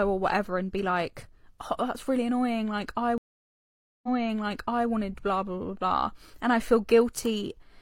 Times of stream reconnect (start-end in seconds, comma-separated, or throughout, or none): 3.18-4.89